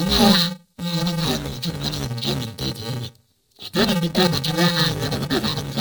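From start to finish the speech carries an interleaved audio read as planar fault. Each short block of alternating left and right samples is split so its first half goes to one channel and its second half to the other. With blocks of 2.9 ms, which fits a 128-sample block, there is no clear octave drop. The speech sounds dull and robotic, with a buzz at 345 Hz. A spectrogram shows a steady 345 Hz line with harmonics over blurred formants. The waveform has regular jumps every 2.9 ms.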